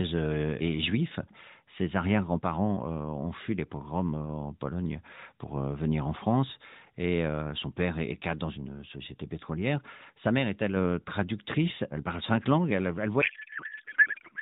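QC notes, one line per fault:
13.22–14.42 s, codec payload misread: right after "parle cinq langues elle", the speech gives way to garbled noise and warble that barely tracks it. The receiver takes octet-aligned AMR frames as bandwidth-efficient ones, so every field is read from the wrong bit position and the decoder synthesises from meaningless parameters. It runs to the end of the clip. Before it, the narrowband AMR sound, with nothing above 4 kHz, shows light codec coloration that fits 12.2 kbps.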